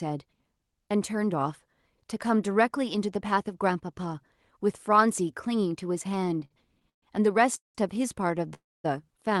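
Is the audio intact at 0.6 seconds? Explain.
Yes, the speech at 0.6 seconds is intact, with no fault at that moment beyond the normal sound of the call path it passed through.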